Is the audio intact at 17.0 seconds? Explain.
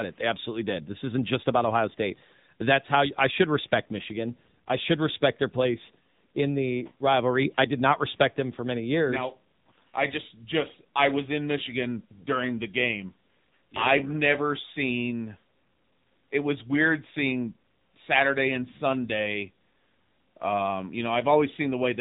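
No, AMR narrowband mobile codec damage runs through the whole clip, including 17.0 s. The speech is rebuilt from a vocal-tract model with sparse pulses, sounding buzzy and synthetic in a way that fits a low rate near 8 kbps, and nothing passes above 3.8 kHz.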